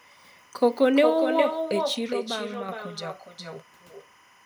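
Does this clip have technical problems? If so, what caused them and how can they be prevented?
Yes. A faint, steady chirping warble sits behind the speech for the whole clip, far below it at around 35 dB down. This is timecode bleed. Linear timecode running at 25 frames per second is leaking in from a neighbouring track or cable, and its square wave flips between two pitches near 1 kHz and 2 kHz, which produces that buzzy twitter. Route timecode on separate, well-shielded cables, away from audio lines, and keep it off adjacent recorder tracks.

Every phrase is also shadowed by a thinner copy, about 6 dB quieter, arriving roughly 0.4 s later. This is echo with no canceller. The far end is playing the call over a loudspeaker, its microphone picks that playback up again, and nothing subtracts it before it travels back across the network to the talker. Enable acoustic echo cancellation at the far end, or have that participant use headphones.

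From 2.13 s to 2.69 s the sound abruptly drops by about 6 dB and then returns, with nothing else about it changing. A step of exactly that size is what a mono sum does when one stereo channel vanishes, so this is likely one channel dropping out. Secure and check both channel connections, and monitor each channel separately during recording.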